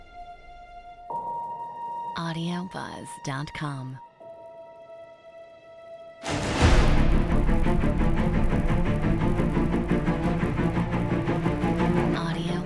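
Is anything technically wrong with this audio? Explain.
Yes. Throughout the whole clip a regular buzz rides on the sound at 50 Hz. It is present only while there is signal. This is a resampler restarted on every block. Each chunk was converted on its own, which fits a 48 kHz to 24 kHz conversion run in 20 ms blocks. At every block edge the filter lacked the true neighbouring samples, leaving a small error fifty times a second that fuses into a buzz.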